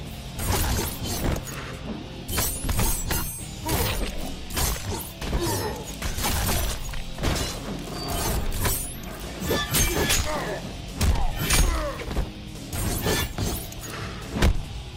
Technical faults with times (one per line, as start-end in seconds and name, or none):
none